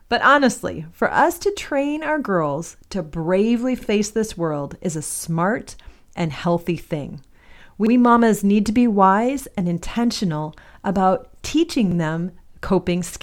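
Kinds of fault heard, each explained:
Overlapping chunks: the speech was handled in 4-second blocks, each starting 50 ms before the previous one ended, so that sliver plays twice at about 3.82, 7.87 and 11.92 s, heard as a brief stutter. Unlike dropouts, nothing is lost; audio repeats.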